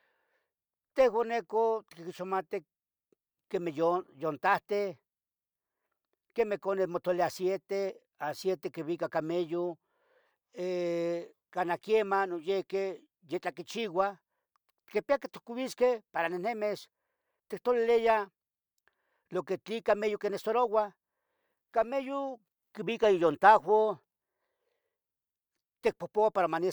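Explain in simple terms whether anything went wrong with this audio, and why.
Nothing went wrong here.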